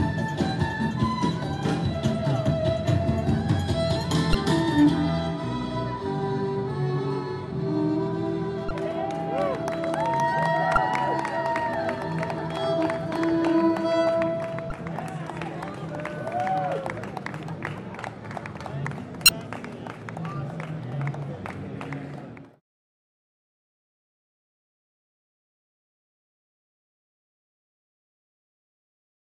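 Damaged data in a compressed stream disrupts this audio at 4.31–4.35, 8.68–8.71, 10.74–10.77, 14.68–14.72 and 19.26–19.29 s, where corrupted frames make the decoder lose sync, each lasting about 35 ms.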